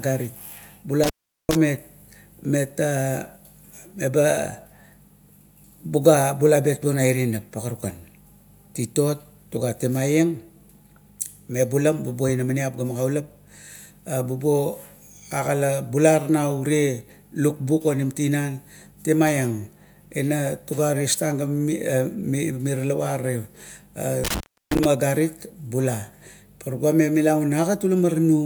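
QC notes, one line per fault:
1.04–1.55 s, intermittent contact: the speech drops out for about 0.40 s, with crackle as the connection breaks and again as it remakes. A loose plug or cable briefly lost contact, so the signal stopped reaching the input and only faint hiss remained during the gap.
24.24–24.85 s, intermittent contact: the connection opens for about 0.33 s. The speech cuts out between crackles at each edge, with faint hiss filling the gap.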